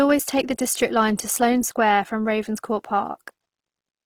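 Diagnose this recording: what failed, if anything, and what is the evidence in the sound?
The codec stage failed: the speech sounds grainy and rough throughout, though the top end survives to about 20.4 kHz. That's likely Opus compression, with noise-filled bands pointing to a 16 kbps rate.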